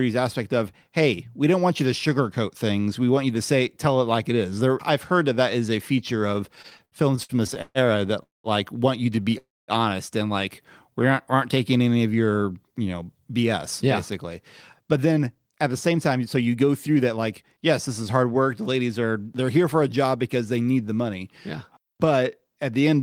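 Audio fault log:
6.55–7.78 s and 9.16–9.35 s, repeated stalls (stutter): 10 and then 3 short gaps, longest 131 ms, filled by continuing the last sound; the spectrogram shows smeared, repeated frames.
8.23–8.47 s and 9.38–9.71 s, call audio freeze: gaps of 212 ms and 300 ms, mostly silent (180 and 220 ms), likely from held-up packets; the waveform goes flat before resuming.
10.62–11.16 s, jitter buffer slow-down: 53 ms added by repeating pitch periods, about 91% speed at unchanged pitch; harmonics in the spectrogram stretch horizontally.
12.86–18.24 s and 19.82–20.36 s, jitter buffer speed-up: around 400 ms and 40 ms removed, running at 108% and 106% speed, so the audio sounds hurried; syllables appear compressed in time.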